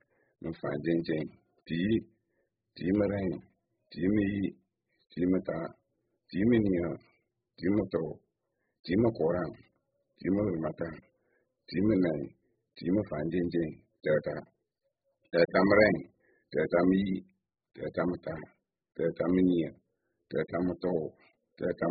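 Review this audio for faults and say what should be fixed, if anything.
The whole speech clip sounds dull and smeared, with nothing above 5 kHz, and the sibilants and sustained vowels take on a warbling, fizzy texture. The likely cause is heavy AAC compression, where the encoder discards the upper band and coarsely quantises what remains against a hearing model. The damage is severe enough to point to AAC-LC at around 8 kbps. On a spectrogram, energy stops at a hard ceiling near 5 kHz, with patchy holes and blotchy noise filling the bands below. Encode at a much higher bitrate, or keep an uncompressed master and compress only for delivery.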